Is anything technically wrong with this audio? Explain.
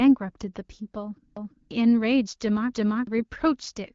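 Yes, there are two kinds of fault in this speech clip.

From 1.37 to 1.71 s and again from 2.73 to 3.07 s there is a repeated buffer. Fresh audio arrived late, so the device replayed its last block of about 341 ms, which fits an 8192-sample buffer, one extra time. Each instance is heard as a short stutter with a hard join, and roughly a third of a second of new audio is skipped. Unlike a dropout, there is no gap, only a duplicate.

From 3.18 to 3.23 s there are AMR bit errors. On a weak link, a few frames arrived with their less protected bits flipped at a rate of around seven percent. The checksum still passed, so the decoder drove the voice model with misplaced pulses and off gain and spectrum values. The result is a brief hoarse, gargly scratch while pitch and level hold. That distinguishes it from the uniform raspiness of a low AMR-WB bitrate, since the 12.65 kbit/s wideband coding elsewhere sounds clear.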